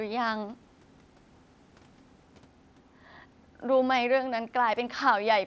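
No faults heard in this speech; the band stops at 8 kHz, consistent with the call microphone processing and the mSBC Bluetooth headset path.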